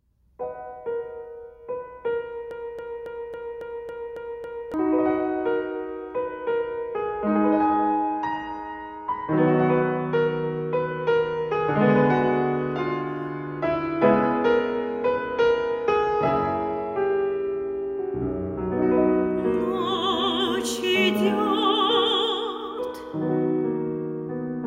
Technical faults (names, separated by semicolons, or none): broken-record loop